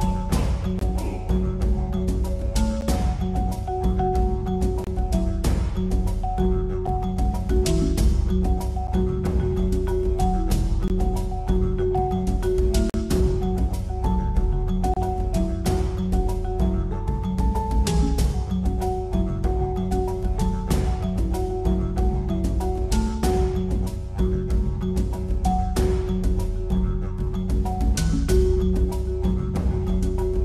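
Consecutive stream segments, each 2.0 s long, carry time stamps that leave a small gap between them, so the player inserts silence: a gap between stream segments at 0.79, 2.81, 4.84, 6.87, 8.87, 10.88, 12.90 and 14.94 s. Each is a hard-edged hole of 9 to 45 ms, with nothing lost.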